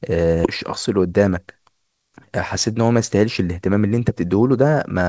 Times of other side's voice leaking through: none

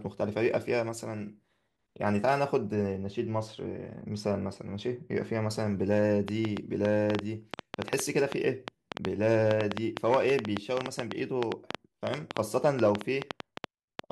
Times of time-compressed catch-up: none

